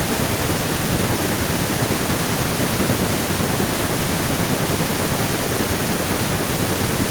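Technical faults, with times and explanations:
No technical faults can be heard in this recording.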